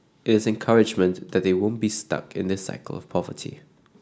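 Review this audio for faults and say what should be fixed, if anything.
Nothing needs fixing: the speech signal shows no technical faults and is ready as it stands.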